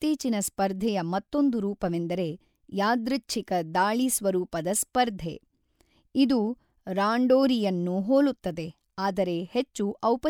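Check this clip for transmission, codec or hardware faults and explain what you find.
No faults turn up anywhere in this speech recording. There is nothing to flag at any point, so no fault needs explaining.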